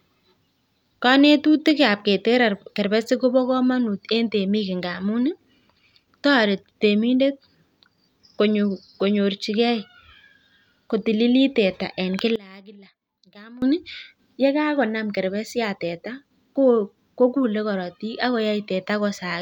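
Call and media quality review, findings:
One channel inverted, 12.36–13.62 s, right after "kotililit teta eng". Speech falls about 21 dB, faint in mono. Likely polarity flip on one stereo leg; centred content cancels on mono sum, leaving only inter-channel difference.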